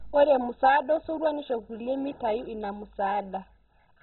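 Throughout, the speech sounds dull and gurglingly granular, likely MP2 compression at a very low rate; a spectrogram shows nothing above 4.1 kHz, with flickering bands below.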